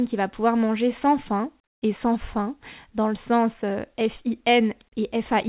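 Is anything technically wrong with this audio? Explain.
Yes. From 1.64 to 1.82 s, between "pouvoir manger sans faim" and "et sans fin dans", the background turns into a flat, featureless hiss about 21 dB quieter. That is comfort noise in place of the background, likely from discontinuous transmission: the receiver filled the 180 ms gap with synthetic noise.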